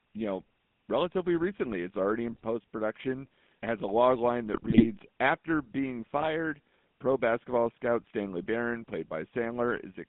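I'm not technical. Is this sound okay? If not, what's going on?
No. The GSM full-rate codec runs through the whole clip. This early mobile-phone system rebuilds the voice from a simple model driven by regular pulses, which gives speech a buzzy, gravelly roughness and strips out everything above about 3.6 kHz, so it sounds muffled and phone-like.

GSM bit errors strike at 2.32 to 2.44 s, just before "production has a log", at 4.54 to 4.85 s, right after "has a log line", and at 6.17 to 6.33 s. Corrupted data scrambles the decoder's settings, so the voice briefly breaks into squawks, pops and gargling.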